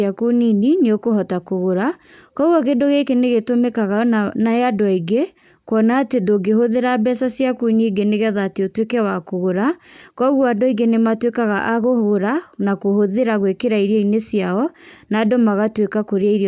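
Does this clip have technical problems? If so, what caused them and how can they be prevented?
No, nothing in this speech recording stood out as a technical problem on listening, so there is no fault to trace to a cause or to prevent.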